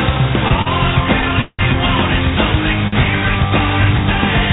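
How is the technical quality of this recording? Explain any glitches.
The recording has three timing faults of the kind a real-time call path produces, heard over a band that stops at 4 kHz, which points to a telephone codec such as G.711 A-law at 64 kbps.

Between 0.48 and 0.68 s there are repeated stalls (stutter). The jitter buffer ran dry four times, with the longest wait 40 ms. Each time the receiver extended the previous sound, filling 76 ms in total, so the passage drags and stutters while nothing is lost.

From 1.41 to 1.61 s a call audio freeze is heard. The sound holds as a fading buzz or hiss for 176 ms, including 40 ms of silence, then resumes where it stopped. The likely cause is packets held up in transit, which emptied the buffer and added delay.

At 2.88 to 2.94 s a short stall from a late packet occurs. One packet missed its slot, so the receiver stretched the last sound for 49 ms until it arrived. 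The result is a briefly held sound with a slight buzz or dip, and no audio is missing.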